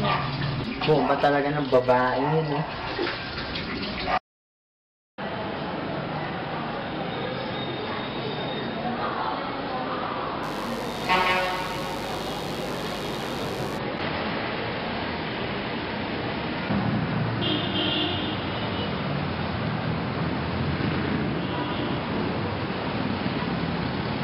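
Mains buzz from 10.43 to 13.77 s: a raspy 50 Hz buzz roughly 15 dB below the signal, showing on a spectrogram as evenly spaced harmonic lines reaching several kHz.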